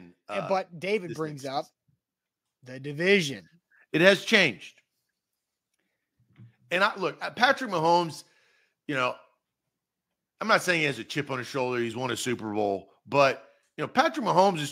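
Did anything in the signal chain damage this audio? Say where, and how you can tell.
Yes, there's some automatic gain rising early on, which sits in the call-processing stage. From 0.27 s to about 3.48 s the level climbs steadily by about 7 dB, and the tell is that the speech and the background noise swell together rather than the talker getting louder alone. The AGC judged the input too quiet and eased its gain up over those three seconds, dragging the noise floor up with the speech.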